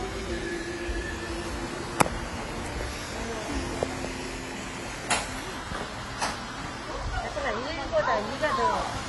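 A recording of everyday sound, with AAC compression damage throughout. Nothing is present above 11.5 kHz, so it sounds dull. The codec damage is plainly audible as a smeared texture. This is likely AAC-LC encoding at a low bitrate, fitting about 32 kbps.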